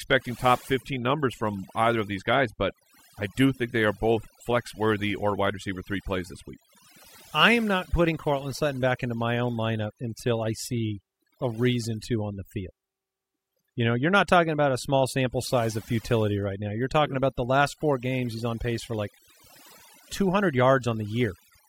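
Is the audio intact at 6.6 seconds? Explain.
No. At 6.6 seconds the speech carries overdone noise removal, and the fault runs through the whole clip rather than starting or stopping there. A noise reduction stage was pushed too hard. It pulls individual frequency bands far down or shuts them off whenever they sit close to its noise estimate. Quiet parts of the voice get removed along with the noise. The background drops and breaks up into twinkling specks.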